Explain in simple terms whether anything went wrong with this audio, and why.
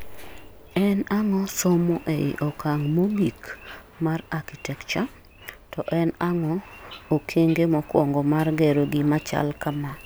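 Nothing went wrong with this speech recording. At no point is the sound disturbed by a technical problem.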